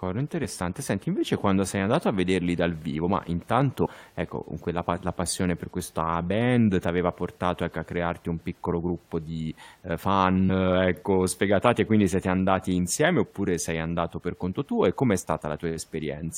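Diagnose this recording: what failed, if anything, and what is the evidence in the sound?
Codec stage: compressed frames skipped. Jumps at 0.41–0.45 s, 3.84–3.88 s and 10.48–10.51 s drop roughly 20, 100 and 50 ms of speech respectively.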